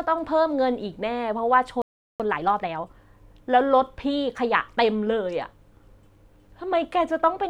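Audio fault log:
1.82–2.20 s, playback stall: the speech cuts out in mid-flow for 380 ms of silence, then carries on from where it stopped. The player likely ran out of buffered data or had its output thread blocked, so nothing reached the output.
2.20–2.94 s, time-compressed catch-up: straight after the gap the speech is hurried to 1.5 times its normal rate while its pitch stays unchanged. The player is cutting its backlog by removing short slices and cross-fading the joins.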